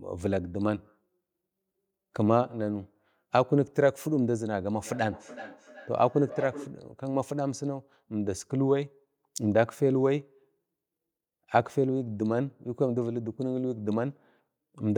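From 4.84 to 6.84 s there's feedback echo between two devices: a nearby device replays the speech into the mic, so it returns roughly every 400 ms, about 14 dB down.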